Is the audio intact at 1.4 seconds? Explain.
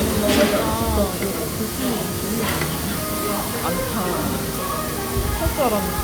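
Yes, the audio is intact at 1.4 seconds, with no fault at that moment.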